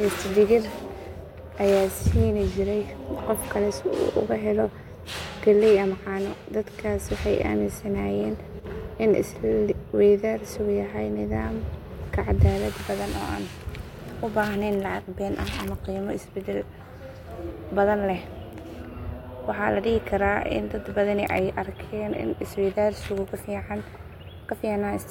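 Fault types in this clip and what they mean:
One channel drops out: from 8.60 to 8.65 s the speech level falls abruptly by about 6 dB for 50 ms, then recovers. The likely cause is one stereo channel going briefly silent, so the mono sum keeps only half the shared signal.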